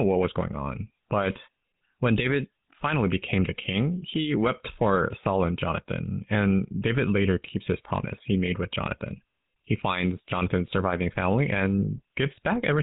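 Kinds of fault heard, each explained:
GSM full-rate codec: buzzy, gravelly roughness across the whole speech, nothing above about 3.8 kHz, from a vocal-tract model driven by sparse regular pulses, fitting 13 kbps.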